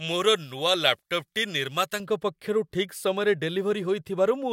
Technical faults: pre-emphasis left on

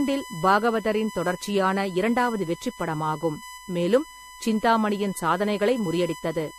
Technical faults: USB whine; generation loss

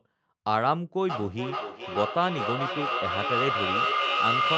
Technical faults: feedback echo between two devices

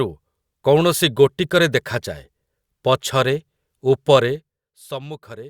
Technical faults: zipper noise

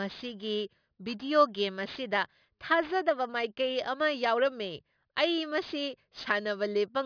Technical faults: aliasing

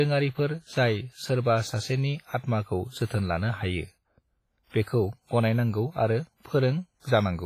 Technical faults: WMA compression

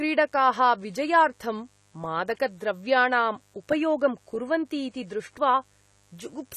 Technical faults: mains buzz; AAC compression

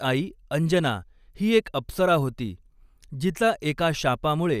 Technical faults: none

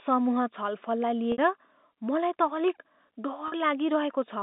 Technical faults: packet loss with pitch repetition

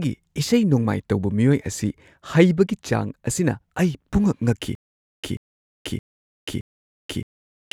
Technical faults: stutter with silent gaps

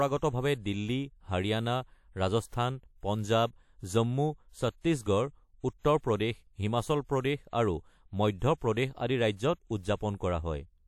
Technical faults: pre-echo

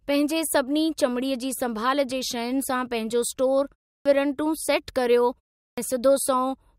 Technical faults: clipped start after a pause

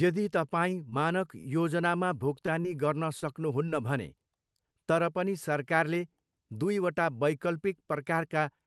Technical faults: short concealed packet loss; short stall from a late packet; scattered short gaps

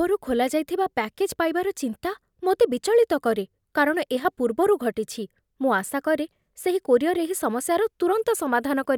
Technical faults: one channel drops out

